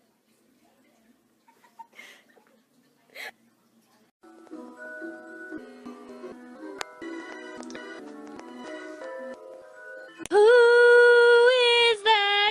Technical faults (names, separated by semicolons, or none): none